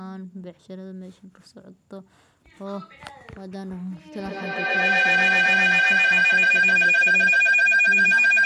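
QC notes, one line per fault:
4.13–8.46 s, feedback howl: the microphone-to-loudspeaker loop between two devices gains level each pass, narrowing to a tone near 3 kHz that pulses every 150 ms or so and peaks about 17 dB above speech to the end. Spectrogram: bright horizontal band; waveform: swelling envelope.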